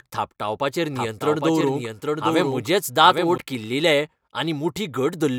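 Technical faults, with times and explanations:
0.96–3.38 s, doubled audio track: a second full-band copy trails about 0.7 s behind, a few dB quieter, with no decay. Likely captured twice by a slower path.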